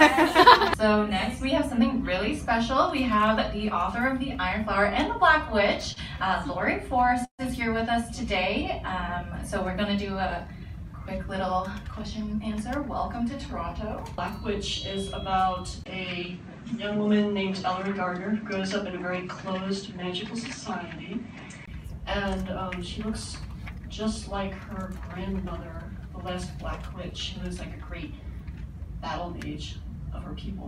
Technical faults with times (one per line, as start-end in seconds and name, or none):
5.93-5.99 short stall from a late packet
7.25-7.42 call audio freeze
11.73-12.41 jitter buffer speed-up
15.84-21.68 input switched to a poorer device